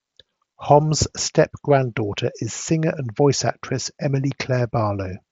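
No technical faults can be heard anywhere in this speech. It comes through a Bluetooth mSBC headset codec, so the sound is wideband but stops at about 7.8 kHz.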